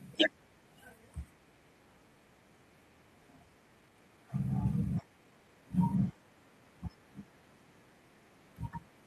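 At 3.23 to 3.25 s the speech has a skip ahead. Roughly seven tenths of a second never plays. With later audio already waiting, that stretch was dropped and playback jumped straight to it, with nothing filling the join. Unlike a dropout or concealment, there is no silence, buzz or smeared tone. The two sides simply butt together, so the speech seems to lose a piece mid-flow and lurch forward.

Right after, from 3.33 to 4.25 s, the jitter buffer speeds up. The backlog had grown, so the receiver trimmed out many tiny pitch-period slices to cut the delay. The speech runs at about 125% speed, losing around a fifth of a second in total. It happens again, more gently, from 4.91 to 5.62 s at about 111%. The talk sounds hurried, but the pitch stays put, which rules out a resampling or clock error that would raise it.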